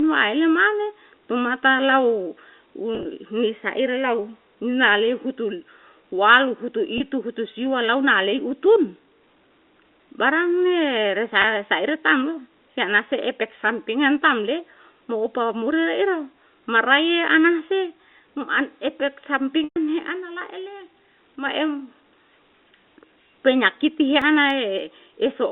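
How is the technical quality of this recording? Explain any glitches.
Two glitches stand out near the end of the speech, heard through a telephone-band channel of roughly 250 Hz to 3.5 kHz that is consistent with G.711 coding.

Packet loss with pitch repetition occurs from 19.64 to 19.76 s. About 120 ms of audio went missing, which fits a run of roughly a dozen short packets. The receiver repeats the last pitch period to fill the gap. The held, buzzy tone fades to silence, and the speech then returns with a brief cross-fade.

CD scratch ticks come between 24.22 and 24.79 s. There are three very short clicks, each a couple of milliseconds or less, spaced about three and a half to the second. A blemish on the disc defeats its error correction once per revolution. The player then patches or mutes the damaged samples, which produces the regular ticking.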